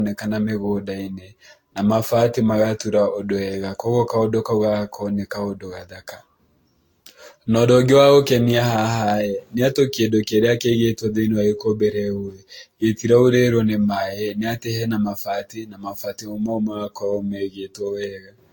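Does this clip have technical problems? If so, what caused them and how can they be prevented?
Yes, there's generation loss across the whole speech clip: swirly, hollow, smeared, nothing above 19.1 kHz, likely from roughly seven successive re-encodes. Prevent it by editing from a lossless master and encoding just once.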